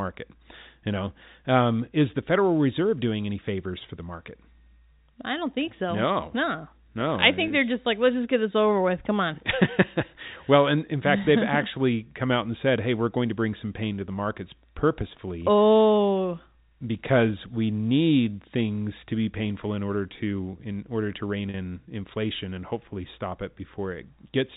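At 7.48 to 7.50 s, just before "they're just like let's", and at 21.50 to 21.54 s, between "in order to rein" and "inflation and hopefully stop", there is packet loss with pitch repetition. About 20 ms and 40 ms of sound went missing. The receiver filled each gap by repeating the last pitch period. Both gaps sound like a brief held, buzzy tone.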